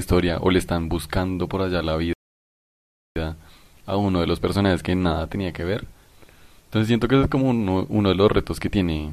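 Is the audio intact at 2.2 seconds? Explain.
No. A rebuffering stall runs from 2.13 to 3.16 s: the player exhausted its downloaded audio and paused until more arrived, so the speech falls silent for about 1.03 s, then resumes exactly where it stopped. Waveform and spectrogram show a flat, empty gap.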